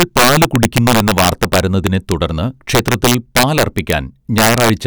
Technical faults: integer overflow

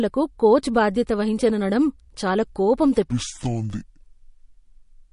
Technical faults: MP3 compression; section at the wrong speed

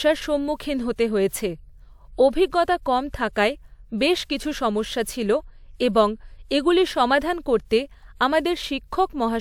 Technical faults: none

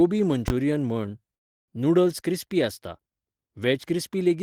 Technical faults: invalid numbers at full scale; call audio freeze

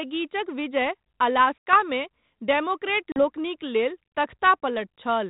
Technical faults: packet loss on an ADPCM call

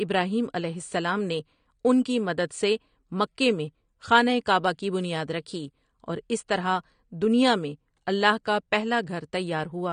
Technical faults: AAC compression; clock slip clicks

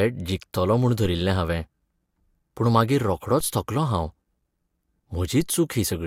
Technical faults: DC step

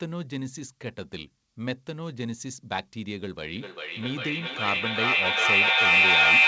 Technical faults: feedback echo between two devices

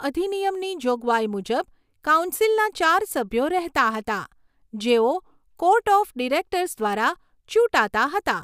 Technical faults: none

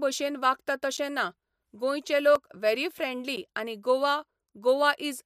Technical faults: block of digital silence

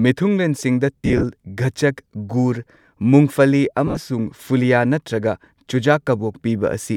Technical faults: lost LE Audio frames

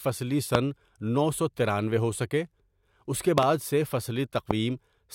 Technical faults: loud pop

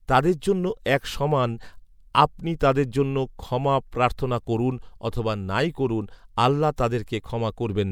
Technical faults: pre-echo

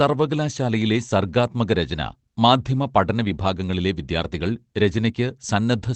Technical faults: lost packet rebuilt from error correction

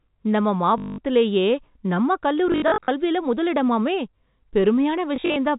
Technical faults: packet loss with last packet repeated

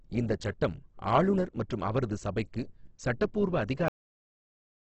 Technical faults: Opus compression; cut-off end

